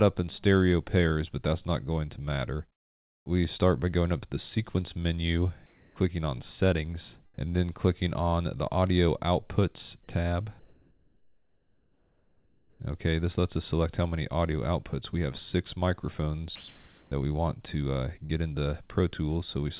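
Comfort noise in place of the background appears at 2.72 to 3.26 s, 5.66 to 5.96 s and 10.6 to 12.8 s. Each pause likely comes from discontinuous transmission: the sender went quiet and the receiver filled the gap with smoother synthetic noise. In the first gap the background drops by about 25 dB. The second is at about the same level as the real background, and the long third is about 2 dB lower.

Sound dropped by the voice detector occurs at 16.56 to 17.12 s. The detector likely mistook part of the sound for background and stopped sending. About 0.2 s of real sound is lost and replaced by steady comfort noise until transmission resumes.

Short concealed packet loss hits at 18.26 to 18.31 s. About 40 ms never reached the decoder, so the receiver extended the preceding sound across the hole and blended back. The result is a brief smear within a band that stops at 4 kHz, consistent with G.711 A-law.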